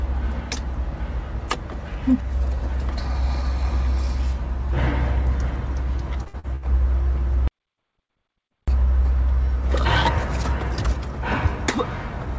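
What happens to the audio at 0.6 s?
Nothing goes wrong at 0.6 s: the audio runs through intact there, carried over the call path with the band limit of its wideband codec, so no content above 8 kHz.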